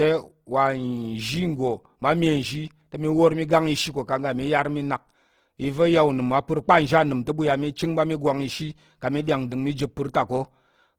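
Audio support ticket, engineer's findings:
Opus compression, throughout the clip: grainy, rough, noisy texture across the speech. Likely Opus CELT mode starved at roughly 16 kbps, filling bands with folded or noise energy; bandwidth still reaches 20.2 kHz.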